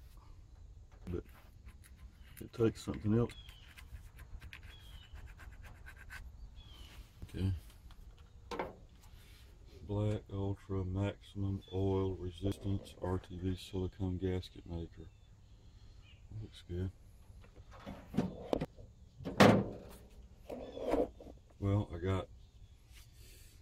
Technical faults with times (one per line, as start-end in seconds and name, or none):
3.32 compressed frames skipped
4.44 compressed frames skipped
7.22 compressed frames skipped
12.52 compressed frames skipped
15.40 compressed frames skipped
18.65 compressed frames skipped